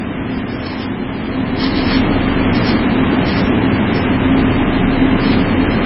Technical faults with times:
0.00-5.85 MP3 compression

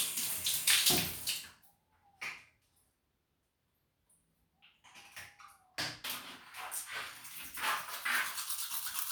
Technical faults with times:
6.10-9.12 pre-emphasis left on

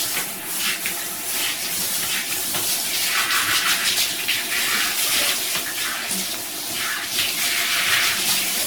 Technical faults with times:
0.00-8.66 generation loss

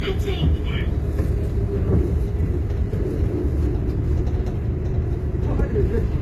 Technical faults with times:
0.00-6.21 low-bitrate audio saved at a high bitrate

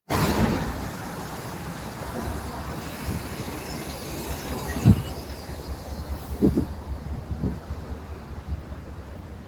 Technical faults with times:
0.00-9.47 noise suppressor applied to music or sounds

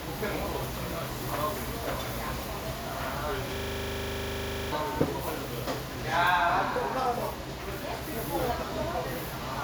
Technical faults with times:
3.56-4.72 system hang loop

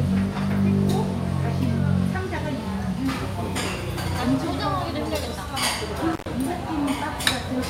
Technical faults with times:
6.12-6.26 intermittent contact

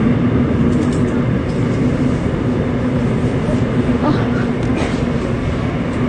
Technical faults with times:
0.00-6.08 transcoding between lossy codecs

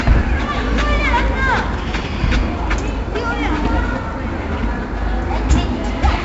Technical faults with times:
0.00-6.25 4-bit ADPCM compression

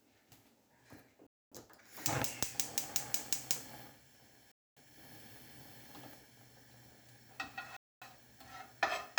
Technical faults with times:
1.27-1.52 gap between chunks
4.52-4.77 gap between chunks
7.77-8.02 gap between chunks

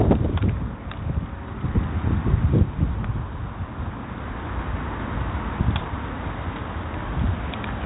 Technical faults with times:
0.00-7.85 4-bit ADPCM compression

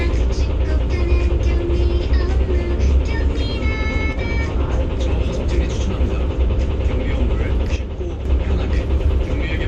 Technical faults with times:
4.13-4.18 one channel drops out
7.76-8.25 one channel drops out

